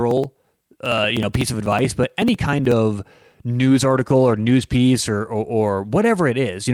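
Periodic USB or driver dropouts run from 0.11 to 2.72 s. Roughly every 0.062 s, a background task stalls the audio path and about 2 ms of speech is skipped outright. This produces a steady train of around forty small ticks, heard only where speech is present.

A call bitrate drop begins at 3.53 s and lasts to the end. A falling bandwidth estimate starves the encoder, with the change in quality fitting a cut from about 48 kbps to around 15 kbps. The speech turns coarse and watery, worst for about a second at the lowest rate.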